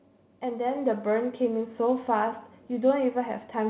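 From 0.41 s to 2.15 s, automatic gain rising: the gain control judged the incoming level too low and pushed its gain up step by step, adding about 5 dB over those 1.7 seconds. The speech and the background noise beneath it swell together, so the room seems to creep closer rather than the talker simply getting louder. All of it sits within a narrowband call sound with nothing above 4 kHz, as a G.711 telephone codec would give.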